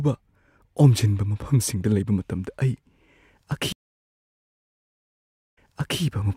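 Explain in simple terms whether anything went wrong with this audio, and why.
Something did go wrong, at 3.72 seconds. The speech suddenly stops and there is silence for about 1.8 seconds. This is a stream reconnect. The connection to the source dropped, so the player went quiet. It then connected again and restarted its decoder partway through the stream. When the speech comes back, it starts from a point about 0.44 seconds earlier, so a short stretch is heard twice. The first moment after the gap is muted or fades in. The whole disturbance ends at 6.01 seconds.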